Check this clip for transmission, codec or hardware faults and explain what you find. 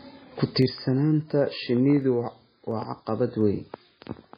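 Two faults are present: codec damage throughout and periodic clicks.

Throughout the speech, the sound is dull and watery, with nothing above 5 kHz. This is likely MP3 compression at a very low bitrate, around 16 kbps, where the encoder cuts treble and drops weak components.

From 0.62 s to 4.1 s, a regular click recurs about every 0.7 s. These are likely clock drift buffer slips, where mismatched device clocks, roughly 300 ppm apart, force a few samples to be dropped or repeated at each slip.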